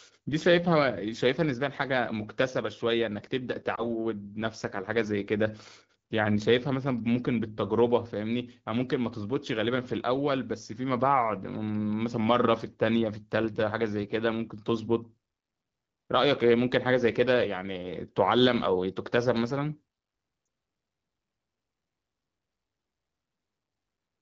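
At 3.75 to 3.84 s and again at 20.45 to 20.47 s there's a short dip or warble: lost AMR speech frames. Each bad frame was patched by replaying the last good pitch and vocal tract settings at lower gain, which fits one missing 20 ms frame in the AMR-WB stream.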